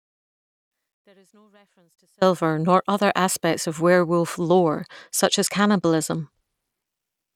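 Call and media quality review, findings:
Speech absent from the start until 2.22 s, only a faint trace about 40 dB below normal, then abrupt return, not a fade. Likely an audio dropout to a faint residue: signal lost upstream while the path stayed live.

4.42 to 6.85 s: treble dulled, gritty noise over the speech, then recovery. Bluetooth SBC bit pool drop, consistent with bit pool falling from 31 to 15 (near 105 kbps). Top sub-bands starved, remainder coarsely quantised.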